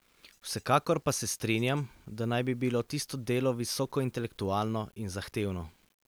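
From start to finish, the speech carries a grainy, gritty distortion that shifts with the voice. Quiet passages and word tails sound rough and sputtery. The likely cause is low bit depth without dither, about 9 bits rounded, leaving error around 40 dB below the signal.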